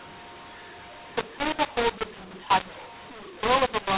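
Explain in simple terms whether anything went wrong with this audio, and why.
Yes, something went wrong: the speech has a mu-law and A-law mix-up running from start to finish. It was coded in A-law telephone format but played back as mu-law, so loudness levels get scrambled, the speech sounds harsh and gritty, and the gaps between phrases hiss instead of going quiet.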